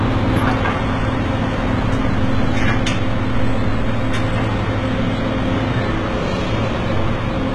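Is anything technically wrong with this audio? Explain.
Yes. Throughout the clip, the audio shows HE-AAC compression damage, likely from encoding at a very low rate; the heavy degradation points to something around 16 kbps. The codec keeps only the lower spectrum and regenerates the treble by copying lower bands upward under a coarse envelope, so the top end is synthetic and its harmonics don't align with those below. The result is a gritty, metallic upper range with nothing above 11.8 kHz.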